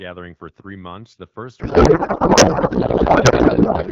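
Speech coded as AMR wideband, clear up to 1.59 s at a quality that fits the 12.65 kbit/s mode, then a codec payload misread: from 1.59 s to the end, octet-aligned AMR frames are parsed as bandwidth-efficient, so shifted fields yield garbled warbling noise barely tracking the speech, unlike low-rate raspiness or brief loss gaps.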